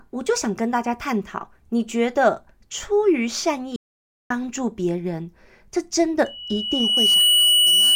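At 3.76 s the speech cuts off abruptly and returns at 4.30 s. The 0.54 s gap is silent with no room tone underneath. This audio dropout to silence likely came from a momentary loss of the input while recording continued.

From 6.25 s to the end, a loudspeaker feedback squeal appears. The microphone is re-amplifying its own loudspeaker output, and a single 2.9 kHz tone builds over roughly a second into a whistle sitting about 5 dB above the speech.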